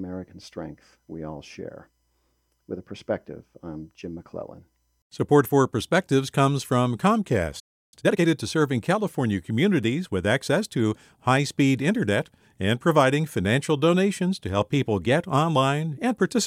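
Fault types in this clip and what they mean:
playback stall: The player likely ran out of data or was blocked, so the speech drops to silence for about 0.33 s from 7.59 s.
time-compressed catch-up: To clear its backlog, the player cut and cross-faded small pieces, so speech runs at double speed, pitch unchanged, from 7.94 to 8.26 s.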